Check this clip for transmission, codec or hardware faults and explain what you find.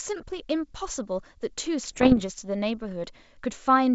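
The clip has one transmission fault. From 1.83 to 2.25 s, bit errors on an ADPCM link, at a rate somewhere under one percent, throw the decoder's step size and predictor off track. The result is pops and rough, ringing bursts with brief jumps in level. The G.722 wideband coding itself, consistent with full-rate 64 kbit/s, adds at most faint coding damage.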